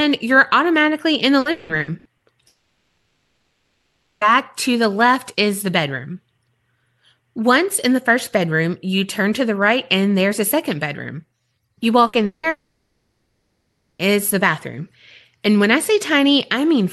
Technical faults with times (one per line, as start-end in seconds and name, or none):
1.39-2.26 repeated packet loss (robotic sound)
2.47-4.24 long network dropout
12.07-12.16 burst of packet loss
12.25-14.02 long network dropout